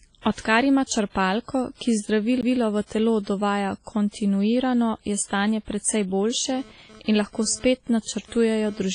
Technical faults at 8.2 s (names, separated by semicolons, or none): WMA compression; GSM phone buzz